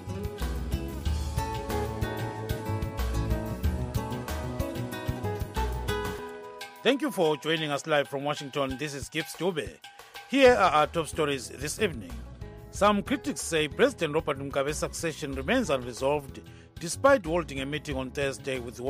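No technical faults can be heard anywhere in this audio. Nothing in it needs a time mark or a cause to explain.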